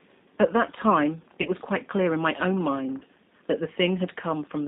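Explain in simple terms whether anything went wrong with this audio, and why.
Two things went wrong here. The whole clip went through the G.729 codec, a phone-call codec that rebuilds speech from a rough model of the voice instead of sending the actual sound. Everything above about 3.7 kHz is gone, and the speech sounds noticeably rough and a bit artificial all the way through.

There are also two moments of VoIP packet loss concealed by the speech codec, at about 1.42 to 1.50 s and 2.98 to 3.04 s. Each gap is about 30 ms of missing audio, which points to a single lost packet each time. The decoder filled it by stretching the last bit of sound into a buzzy or noisy, fading smear, and the sound stays weak or distorted for a moment after the signal returns.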